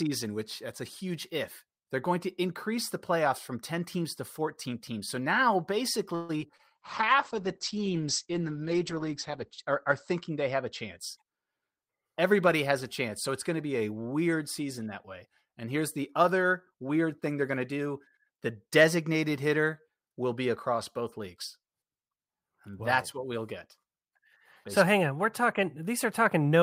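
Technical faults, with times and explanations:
6.15 to 6.61 s, repeated packet loss (robotic sound). Four gaps hit the speech in under half a second, the longest about 136 ms. Each gap is bridged by extending the last stretch of sound, so 196 ms is synthetic fill. Another 60 ms simply drops out. Concealment covers 43 percent of the span. The repeated patching gives a choppy, robotic quality with pieces missing.
6.77 to 11.09 s, call bitrate drop. The encoder's bitrate falls from 32 kbps to 9 kbps. It stays at its lowest for about 2.5 s. With so few bits, the coding gets coarse. The audio bandwidth also shrinks from 20 kHz to 8 kHz, removing the upper frequencies. The speech turns rough and muffled, with a watery edge, until the bitrate climbs back.
16.74 to 17.87 s, jitter buffer speed-up, starting just after "here's the other". Too much audio has built up in the buffer. The receiver trims it by cutting out short pitch-period pieces again and again, roughly a tenth of a second in all. 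Playback runs at about 109 percent speed. The pitch stays the same, but the speech sounds hurried.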